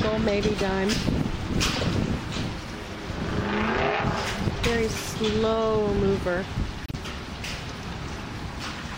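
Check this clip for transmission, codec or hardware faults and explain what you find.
Two short codec glitches are present. Corrupt frame decoded, at 1.75–1.83 s and 6.85–6.95 s. Damaged compressed frames were played anyway, spraying misplaced energy. Each sounds like a chirp or noise burst. The first peaks near -10 dBFS, the second near -15 dBFS, and they span about two and three bad frames respectively.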